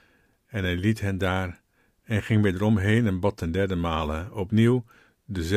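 A short speech recording, with nothing technically wrong anywhere in it. The audio holds steady for its whole duration, with no audible disturbance at any point.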